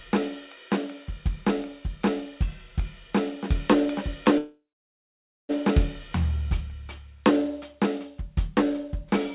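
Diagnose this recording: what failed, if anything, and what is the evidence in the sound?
Call audio freeze from 4.38 to 5.51 s, likely a network stall emptying the jitter buffer: the music fades to 0.86 s of silence, then resumes where it stopped. Unlike a dropout, nothing is lost.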